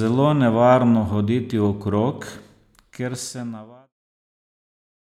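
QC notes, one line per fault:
Nothing to flag on this speech clip: the level eases gently down from around two and a half seconds and is gone by 3.94 s, a smooth editorial fade-out with no click or hard edge.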